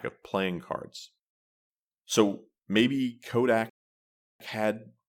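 At 3.70 s the speech drops abruptly into silence, then picks up at 4.40 s exactly where it left off. This is a rebuffering stall: playback ran out of downloaded audio and waited for more, adding about 0.71 s without losing anything.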